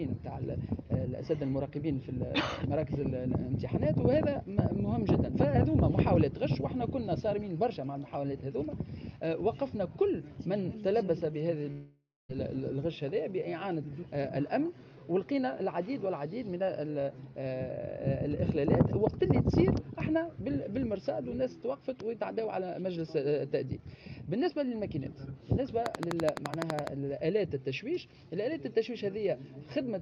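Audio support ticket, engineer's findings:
Long network dropout, 11.71–12.31 s. Sound stops and the last moment smears into a fading buzz/hiss, then about 0.24 s of near-silence before audio resumes with 0.58 s absent. Likely a network packet loss burst. Jitter buffer concealment extends the final audio, fades out, then playback skips past the lost section.

Train of clicks, 25.86–26.88 s. Steady ticking of near-identical pops, regularly spaced at 11.9 per second, roughly fifteen in total, around 20 dB above the surrounding sound and audible throughout. Likely interference or a struggling interface injecting periodic pulses into the signal path.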